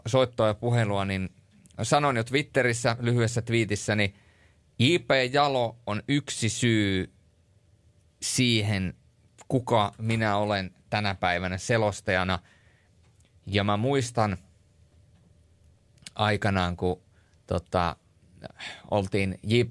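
No technical faults are audible anywhere in the speech recording.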